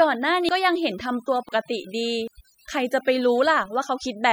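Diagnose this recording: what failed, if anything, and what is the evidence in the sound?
Overdone noise removal at the processing stage, throughout: the background drops and breaks up into twinkling specks, as quiet bands are gated out.

An abrupt jump in the sound at 0.49, 1.49 and 2.28 s, with no gap, points to a likely dropped buffer (overrun) in the driver, each skipping roughly 70 ms of audio.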